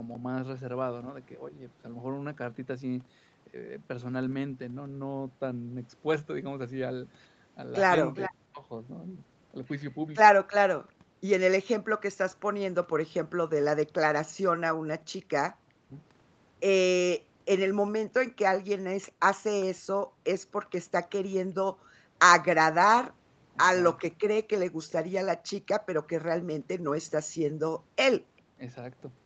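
A speech recording carried over a call, with nothing above 8 kHz, which fits Opus at about 32 kbps. Where both sides talked at once, the echo canceller likely could not tell its own talker from the returning far-end sound and turned both down, causing speech suppressed in double talk. From 0.04 to 1.63 s the voice dips gently, by only a few decibels. Much harder cuts, close to silence, hit at 8.29 to 8.65 s, 15.72 to 15.97 s and 28.54 to 28.65 s. From 8.14 to 10.93 s the far end's canceller likely failed to remove all of its loudspeaker pickup, producing an echo leak: a copy of the voice returns 403 ms late, roughly 10 dB below the direct speech.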